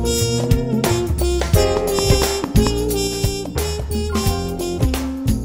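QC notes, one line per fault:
1.77 to 2.68 s, train of clicks: a run of about five sharp, near-identical ticks at a steady pace of about 4.5 per second, standing well proud of the material at roughly 15 dB above it. Because the clicks keep the same shape and spacing and ride over the sound regardless of what it is doing, this is likely a repeating pulse from outside the audio itself, such as interference from nearby equipment or a faulty connection or power supply.
3.07 s to the end, sudden gain jump: the level drops abruptly by about 4 dB and stays down for the remainder of the clip, with the background noise falling by the same amount at the same instant. That the floor and the content step together, with no fade between them, points to a digital gain change applied from one sample to the next, likely a level setting or bit shift switched in without a ramp.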